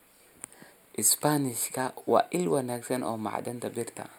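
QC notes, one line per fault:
Throughout, channel delay (comb filtering). One channel lands a tiny fraction of a millisecond late, which fits a delay of about four samples. Summed to mono, the speech cancels at evenly spaced frequencies, the first near 7 kHz. The top end sounds thin and phasey.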